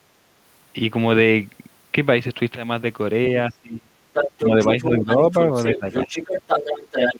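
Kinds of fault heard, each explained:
Speech suppressed in double talk: the talker's speech drops away in level, deepest at about 25 dB between 3.5 and 3.97 s, with shallower dips near 4.84, 5.74 and 6.05 s, likely an echo canceller turning everything down while both sides spoke.
Other side's voice leaking through: a second, separate voice sits about 5 dB under the talker from 4.13 to 4.91 s, about 10 dB under briefly near 5.1 s, and about 5 dB under from 5.32 s to the end. It is likely loudspeaker playback left in the microphone. It is a different voice, not a delayed repeat of the talker's own.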